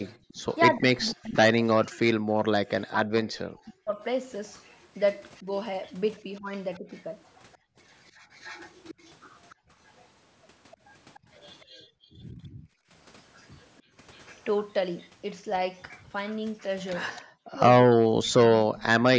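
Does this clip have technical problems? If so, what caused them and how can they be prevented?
Yes. Echo leak: a faint copy of the speech trails it by about 297 ms, from 0 to 0.39 s and 4.58 to 18.3 s, about 30 to 35 dB down. This is likely a far-end echo canceller letting residual loudspeaker pickup through. On a spectrogram it looks like faint, delayed duplicates of the speech harmonics. Using a headset, or lowering the loudspeaker volume, prevents it.

Background gated by the echo canceller: the room tone drops by about 31 dB at 0.24 to 0.28 s, and by up to about 34 dB in spells totalling about 1.5 s between 7.58 and 13.97 s. It appears as flat gaps in the waveform's noise floor. Tuning the canceller's suppression to be less aggressive, or adding comfort noise, prevents it.

Speech suppressed in double talk: the speech dips by as much as about 40 dB for about 3 s within 0.75 to 6.87 s, briefly by about 30 dB between 11.23 and 11.84 s, and for about 1.5 s from 17.21 s to the end, seen as sudden notches in the waveform envelope. 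This is likely the echo canceller turning down the voice while both sides talked at once. Avoiding overlapping talk, or using a canceller with better double-talk detection, prevents it. The call's band limit leaves nothing above 8 kHz on the spectrogram.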